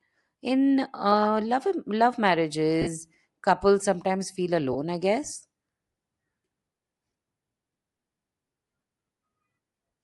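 Speech runs through the whole clip with plainly audible codec damage. The upper spectrum sounds thinned and noise-filled, which gives the voice a breathy, grainy edge. This is likely Bluetooth LC3 compression, the LE Audio transform codec. Sections of the high band are dropped and replaced with noise. The degree of damage fits a moderate rate of around 48 kbps with 10 ms frames. There are also two brief dropouts from lost LE Audio frames. The first runs from 2.82 to 2.88 s. It lasts about 50 ms, which fits five lost 10 ms frames. The second runs from 4.73 to 4.76 s, about 20 ms, which fits two frames. In each gap the decoder repeats the last spectrum with scrambled phase. Voiced sound turns into a short noisy smear rather than clean silence.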